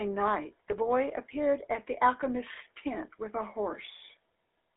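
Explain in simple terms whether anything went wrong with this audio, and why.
The whole clip has passed through the GSM full-rate codec, the early mobile phone coder. It rebuilds the voice from a simple pulse pattern, so the speech sounds buzzy and gravelly. Only roughly 300 Hz to 3.5 kHz survives, making it thin and muffled.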